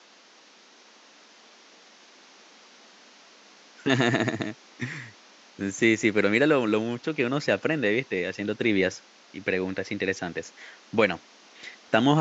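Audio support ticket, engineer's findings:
No faults found in the speech signal; only the room noise of the recording space is present, sitting about 29 dB below the speech, and it belongs to the recording rather than the system.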